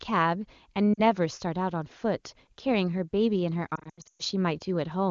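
At 0.94 s, lost AMR speech frames cause a 40 ms warble. From 3.75 to 4.22 s, 300 ms of losses scattered over the wideband speech drop the sound toward near silence, with runs up to 0.12 s. Spectrograms show harmonics fading out and waveform envelopes dipping toward silence.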